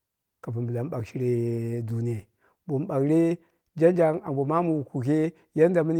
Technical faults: none

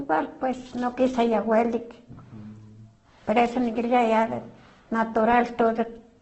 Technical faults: Opus compression

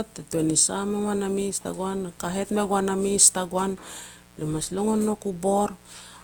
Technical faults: mains buzz; generation loss

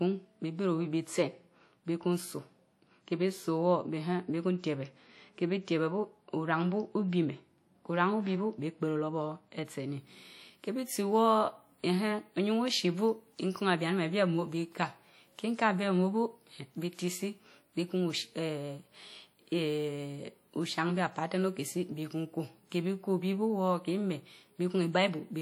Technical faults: WMA compression; de-emphasis applied wrongly

